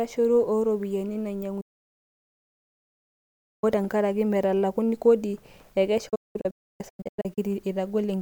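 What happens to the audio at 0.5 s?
Nothing goes wrong at 0.5 s: the speech runs on intact through that moment, with no dropout, click or distortion.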